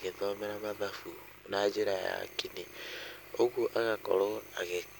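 Throughout the speech runs a mains buzz on a 50 Hz base, roughly 25 dB under the talker, raspy with harmonics into kilohertz rather than a smooth low hum.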